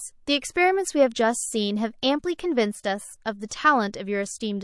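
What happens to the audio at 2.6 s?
MP3 compression is audible at 2.6 s, as it is across the whole recording rather than at that moment alone. The speech has a watery, swirling quality, with smeared attacks and a dulled top end, which points to a low bitrate of around 48 kbps as the likely cause. Starved of bits, the encoder trims the treble and drops weaker frequency components that flicker in and out between frames, leaving s sounds thin and unstable.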